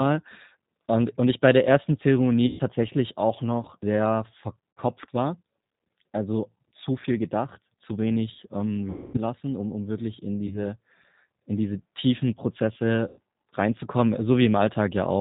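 From the start, the whole clip runs through the G.729 codec at 8 kbit/s, and the damage is easy to hear. The speech is rebuilt from a vocal-tract filter, a pitch predictor and a handful of pulses per frame, so nothing above 4 kHz survives. The voice comes out muffled and a bit rough, with a slightly synthetic edge on top of the telephone-band dullness.

Then there are five spots of VoIP packet loss concealed by the speech codec. They fall at 2.47 to 2.61 s, where about 120 ms went missing, at 4.75 to 4.80 s (60 ms), at 8.90 to 9.18 s (240 ms), at 10.47 to 10.59 s (30 ms) and at 13.08 to 13.19 s (90 ms). The sizes fit dropped 30 ms packets. In each gap the decoder keeps extending its last pitch and filter at falling gain, so the sound smears into a fading buzzy tone or coloured noise. Because each frame leans on the previous one, the voice stays weak and a little off for a moment after the audio comes back. 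The 8.90 s dropout is the longest.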